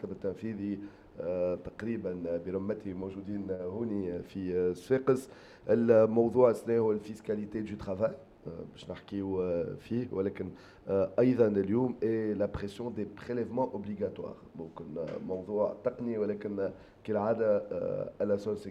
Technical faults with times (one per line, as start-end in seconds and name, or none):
none